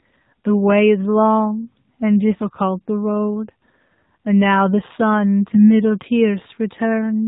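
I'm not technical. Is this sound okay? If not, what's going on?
No. The whole clip has gone through the AMR narrowband mobile codec, the speech system used for 2G and 3G phone calls. It removes everything above 4 kHz and rebuilds the voice from a simple model, so the speech sounds muffled, buzzy and clearly synthetic throughout.

There are also AMR bit errors from 5.47 to 5.67 s. Over a weak link, some less-protected data arrived scrambled. For that moment the voice keeps its pitch and loudness but turns hoarse, scratchy and gargly.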